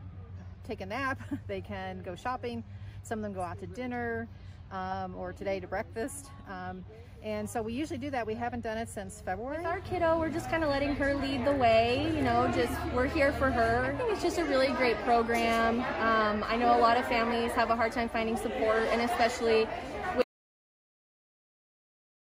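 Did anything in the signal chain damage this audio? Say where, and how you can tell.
Yes. At 20.22 s the sound cuts off mid-flow into silence with no room tone, and it stays that way to the end. That audio dropout to silence most likely came from lost input at capture, with the recorder writing silence.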